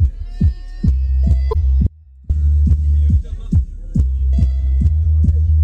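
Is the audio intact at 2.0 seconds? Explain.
No. At 2.0 seconds the audio sits inside an audio dropout to a faint residue, from 1.87 to 2.30 s. The wanted signal was likely lost upstream while the path stayed live, so for 430 ms the sound abruptly drops to a faint leak about 30 dB down before cutting back in.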